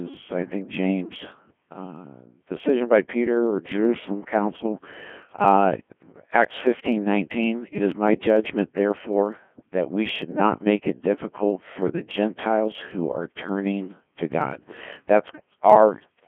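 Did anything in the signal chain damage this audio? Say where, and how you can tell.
Yes. Codec 2 vocoder, throughout, at the codec stage: the speech is robotic and buzzy, with nothing above 3.4 kHz. At 1.6 kbit/s the codec transmits only pitch, voicing, energy and a spectral envelope. The decoder then rebuilds the voice from sine waves, so the original waveform is lost.

Clock slip clicks, from 0.10 s to the end, in the converter chain: a soft, steady rattle of ticks about every 30 ms, hundreds in all. The likely cause is two devices on unsynchronised clocks dropping or repeating one sample whenever their drift adds up to a whole sample, which fits a mismatch of roughly 700 ppm.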